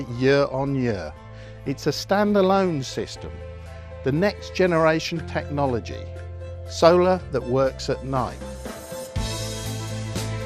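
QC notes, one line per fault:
throughout, MP2 compression: the audio has likely passed through an MPEG Layer II encoder short of bits, fitting a rate near 80 kbps, so upper sub-bands switch off and flicker while the rest are coarsely quantised, giving a plainly dull, gurgling, granular sound.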